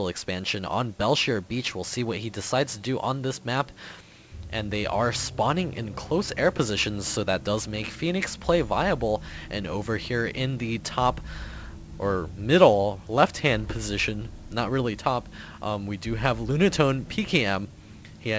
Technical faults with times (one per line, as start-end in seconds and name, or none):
none